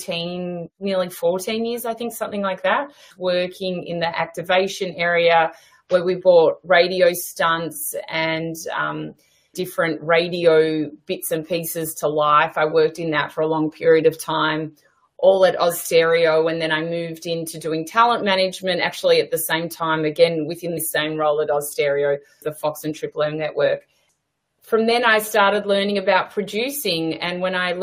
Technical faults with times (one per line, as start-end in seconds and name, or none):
20.77 compressed frames skipped